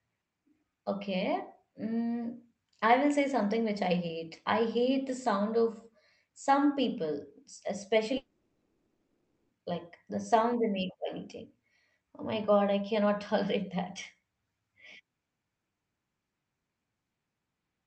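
A long network dropout runs from 8.17 to 9.52 s, likely the result of audio packets failing to arrive over the call link. For about 1.3 s nothing new is heard: the receiver stretches the last sound into a fading buzz, leaving roughly half a second of silence at the end. The speech resumes at "like the sound they" with the missing stretch simply gone. Throughout, the call codec limits the top end to about 8 kHz.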